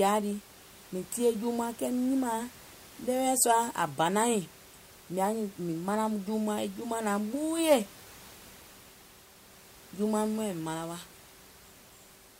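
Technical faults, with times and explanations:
Nothing's gone wrong technically here; the faint room noise you can hear sits about 23 dB under the speech, and that's just the space the mic was in.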